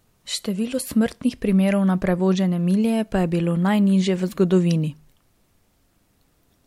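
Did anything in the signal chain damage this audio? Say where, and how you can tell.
No, nothing stood out on listening that would point to damage at any stage of the chain.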